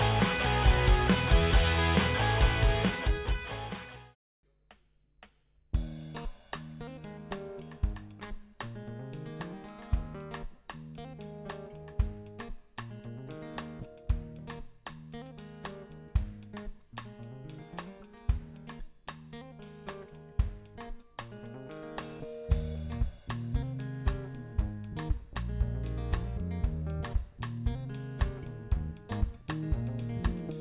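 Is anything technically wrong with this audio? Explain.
No, nothing technically wrong can be heard in this audio. No working path is listed to comment on, so there is nothing further to point to.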